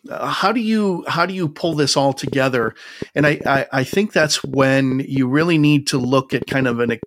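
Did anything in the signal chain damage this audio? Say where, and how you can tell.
Yes: likely interference pickup in the analogue wiring adds a train of clicks from 1.73 s to 7.04 s, roughly thirty irregular ticks, about five per second, about 10 dB above the speech.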